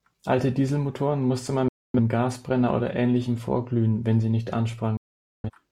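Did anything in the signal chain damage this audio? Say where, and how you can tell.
Yes. A digital broadcast dropout at reception: the receiver stopped getting valid frames and muted. The speech fades out within 3 ms and is silent from 1.68 to 2.00 s and from 4.97 to 5.50 s, gaps that fit six and eleven lost frames.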